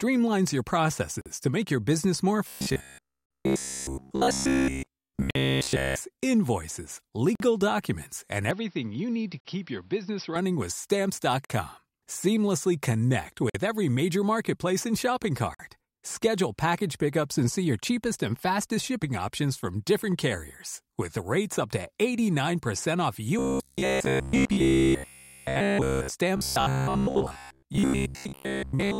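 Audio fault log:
1.21, 3.26, 5.31, 7.35, 9.40, 11.45, 13.50 and 15.55 s: gap at a join of encoded pieces. Silences of about 44 to 48 ms recur every 2 s. The one at 7.35 s comes just before "documents and", the one at 15.55 s just after "major marketplace and shopping". Untrimmed encoder delay and end padding stay in at each join.
2.48 to 5.96 s, 23.39 to 26.12 s, and 26.37 to 28.99 s: robotic sound from repeated short buffers. The first run starts after "make your business more". The sound becomes a rigid metallic buzz at 66.8 Hz, likely from a roughly 15 ms buffer replayed in place of new audio. The final run is less uniform, with about 70% of it repeated.
8.51 to 10.36 s: input switched to a poorer device. The sound turns duller. The level drops about 5 dB, and new noise sits about 35 dB down. No silence marks the change, which likely comes from a switch to a narrower-band microphone.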